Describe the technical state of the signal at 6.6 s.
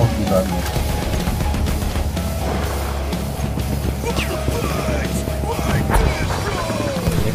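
At 6.6 s a train of clicks is running, from 3.58 s to 7.19 s. Regular pulses tick at 6.38 per second, about 10 dB above the sound, likely from interference or a faulty connection.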